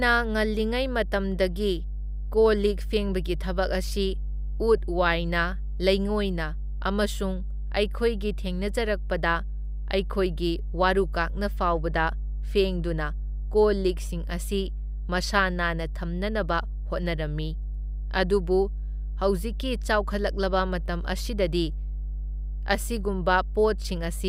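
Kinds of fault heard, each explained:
Mains hum: a steady, loud low tone at 50 Hz sits under the speech for the whole clip, nearly as strong as the talking itself, which points to a ground loop or nearby transformer leaking the power-line frequency into the signal.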